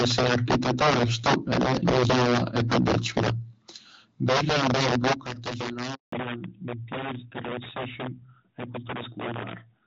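A speech recording carried over a phone call, with several faults stacked on top of one another. Throughout the clip, a gain or summing stage pushes the signal about 9 dB past the largest integer it can hold, and instead of being limited, the value wraps around to the opposite sign. Each time a peak crosses that ceiling, roughly 7 percent of samples, the waveform jumps across the full range, so every loud moment carries violent cracks far sharper than ordinary clipping. From 0 to 3.29 s the loudest syllables also have a harsh, crackling edge with flattened tops, with about 8 dB of overdrive and something like a tenth of samples cut off, most likely because the microphone input was set too high and the peaks hit the converter's limit. The same microphone overload returns more mildly from 4.3 to 5.13 s, at about 3 dB over and with only a small share of samples clipped. At 5.13 s the voice and background drop together by about 9 dB in a single step, right after that distorted stretch, consistent with the call software turning the microphone volume down once it detected clipping. 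At 5.94 s the phone hands the call over from one network to another, and no speech frames arrive during the switch: the voice dies away almost at once, and a handover gap of 180 ms of silence follows until 6.12 s, with whatever was said in that window lost. When audio resumes at 6.12 s, the call has fallen back to narrowband. Up to that point, the HD Voice link sounds clear with only light coding damage, which fits AMR-WB at 12.65 kbit/s. From 6.12 s to the end the call runs on the older narrowband codec, at what sounds like AMR-NB at 12.2 kbit/s. Nothing above 4 kHz survives, so consonants lose their crispness and the voice turns duller and rougher for the rest of the clip.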